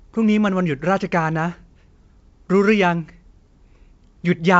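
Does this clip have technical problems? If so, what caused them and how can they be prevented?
No, nothing in this speech needs fixing or preventing.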